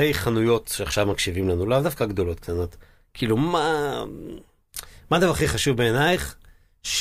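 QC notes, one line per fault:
Nothing to flag on this speech clip; I didn't hear a single problem anywhere in it.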